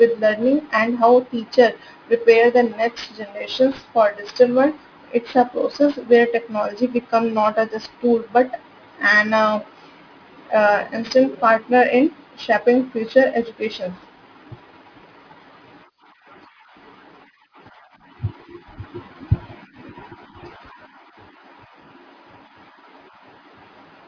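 Aliasing runs throughout: downsampling without an anti-alias filter, which fits a rate near 11 kHz, folds energy above 5.5 kHz back down, leaving sibilants gritty and metallic.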